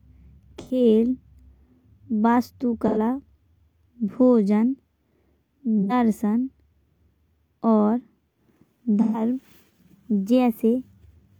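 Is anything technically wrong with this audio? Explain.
Yes, there is AAC frame loss with concealment at 0.59–0.8 s, 2.87–2.98 s, 5.81–5.93 s and 9.01–9.2 s. The decoder patched missing stretches of about 85 ms (128 ms at 9.01 s, consistent with two or three lost frames) from the last good spectrum, so each gap in the speech sounds like a brief smeared, noisy or phasey patch.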